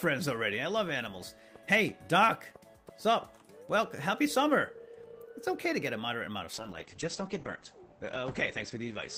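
Up to 6.55 s the audio has full-range top end, but from there to the end of the clip you get a call bitrate drop. The bandwidth estimate fell, so the encoder had to code much more coarsely, which fits a fall from around 32 kbps to about 10 kbps. For the last 2.6 s the top end is cut from 20 kHz down to 8 kHz, so it sounds muffled with a rough, watery grain, and it doesn't recover before the clip ends.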